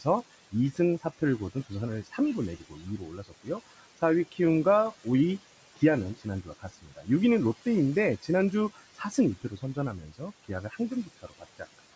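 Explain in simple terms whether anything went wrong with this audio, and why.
Two related things went wrong, both caused by the noise suppressor, the part of the call system that tries to strip out background hiss.

First, there are noise suppressor artifacts all the way through. The room has a steady background noise sitting some way under the speech, which is normal for the recording. The suppressor keeps turning that noise down in the gaps and letting it back up whenever someone talks, so the background seems to pump in and out rather than staying steady.

Second, there's speech cut by the noise suppressor. At times the suppressor mistook parts of the talking for background noise and pulled them down along with it, so bits sound swallowed or faint. It happens from 0.52 to 1.72 s (only about a third of a second of it is affected), briefly from 2.04 to 2.19 s, from 2.59 to 4.0 s (about half of that stretch), from 6.18 to 7.08 s (roughly half a second), and again from 8.75 s right to the end.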